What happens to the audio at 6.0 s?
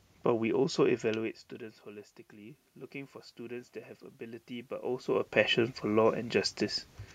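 At 6.0 s the speech plays through intact, with no dropout, click, distortion or other technical fault at that point.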